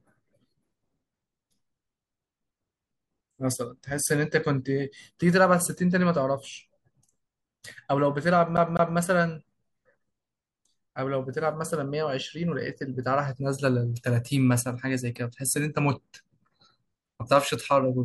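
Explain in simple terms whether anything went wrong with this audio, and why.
Something went wrong with this speech between 8.57 and 8.97 s. It is a CD stuck on one turn. A scratch sent the laser back at the same spot, so the same 0.2 s of sound played twice, with a tiny silent gap at each jump.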